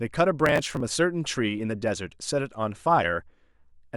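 A speech clip in which, from 0.40 to 0.80 s, a gritty burst of crackle tears across the sound and then stops. This is processor overload crackle: the processor fell behind and missed around twenty buffer deadlines in quick succession. The sound points to very short buffers of roughly 1.5 ms. Each missed buffer was simply skipped, leaving a tiny hard-edged gap, and the rapid string of these dropouts fuses into the rough tearing heard over the speech.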